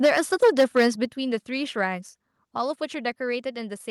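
A short speech recording opens with microphone overload from about 0.04 to 0.87 s. The peaks run roughly 9 dB past the converter's limit and get flattened, with something like one sample in twenty squared off. That gives the loudest syllables a harsh, crackly edge. The likely cause is input gain set too hot, so the converter runs out of headroom and simply chops the waveform tops. Alongside that you hear the microphone volume stepped down twice, at 0.06 s by about 3 dB and again at 1.05 s by about 6 dB. Each time the voice and the background drop together in one sudden step rather than a smooth fade. It sounds like the call software likely noticed the clipping and pulled the device input level down in response, which is why the first step lands right inside the distorted stretch.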